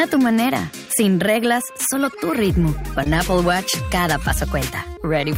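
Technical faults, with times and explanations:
3.04–3.06 s, short concealed packet loss: about 10 ms of audio never arrived in time, and the receiver covered the hole with about 13 ms of made-up continuation, extending the preceding sound and then cross-fading back into the real signal. The result is a brief smear or wobble rather than silence. On a spectrogram the preceding harmonics or noise texture run on unnaturally flat for that instant. On the waveform, the cycles repeat too regularly, then merge at the blend.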